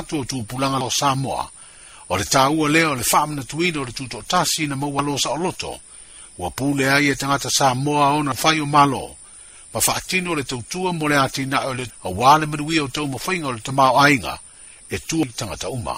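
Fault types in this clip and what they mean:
Damaged data in a compressed stream: some bytes in the encoded file got corrupted, so the decoder chokes on those frames, loses its place and has to hunt for the next valid frame header before it can carry on. Here that shows up as glitches at 0.81, 4.99, 8.32, 11.90 and 15.23 s, each one a brief glitch before the audio picks back up.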